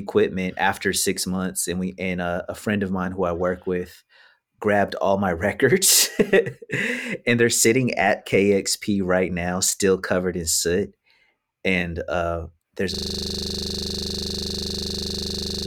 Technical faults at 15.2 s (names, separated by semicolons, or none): system hang loop